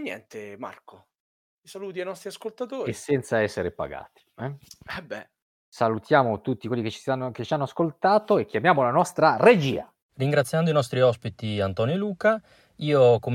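Speech recording with no technical faults to report.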